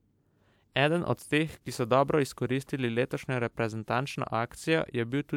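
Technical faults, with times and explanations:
No technical faults can be heard in this speech recording. There are no times to list.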